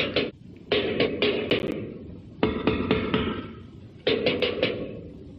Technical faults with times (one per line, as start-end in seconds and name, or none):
1.06-1.08 damaged data in a compressed stream
1.50-1.72 processor overload crackle
4.40 damaged data in a compressed stream